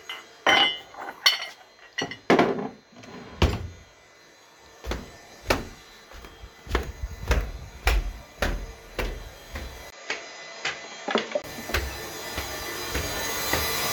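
From 9.90 to 11.44 s, after a 20 ms gap, the sound loses everything above 7.6 kHz, drops slightly and gains its own faint hiss. This is likely an input switched to a poorer device, not simple filtering.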